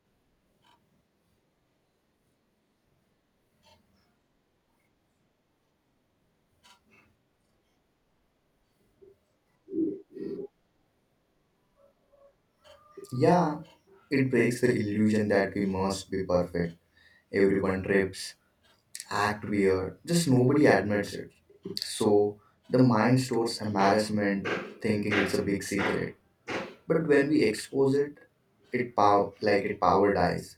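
From start to finish the speech has a channel delay causing doubling. One channel arrives about 46.4 ms behind the other, which fits a 2048-sample buffer, and once the two are folded to mono you hear that late copy as its own event. It sounds like a slap echo at the same level as the original, trailing every syllable.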